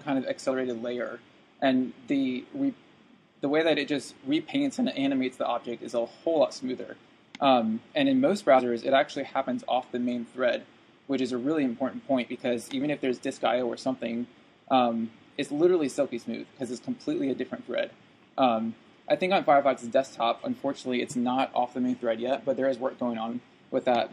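The audio has two compressed-stream faults. At 8.50 to 8.61 s, compressed frames were skipped. The sound jumps forward by about 50 ms of material. At 20.38 to 20.43 s, a corrupt frame was decoded. Damaged data in roughly one frame put energy at wrong frequencies. It comes out as a short squeak or noise burst, peaking near -35 dBFS.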